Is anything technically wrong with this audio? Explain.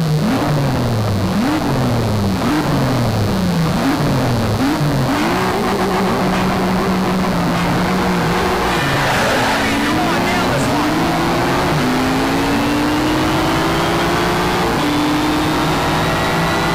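Yes. A mains buzz runs through the whole clip, sitting fairly loud, roughly 15 dB below the wanted sound. It is based on 60 Hz mains. A dimmer, rectifier or poor shielding injects sharp spikes twice per cycle, so the harmonics stretch up to several kHz and produce a steady, raspy buzz. A spectrogram shows evenly spaced horizontal lines at multiples of 60 Hz across the full length. The waveform carries a repeating spiky pattern.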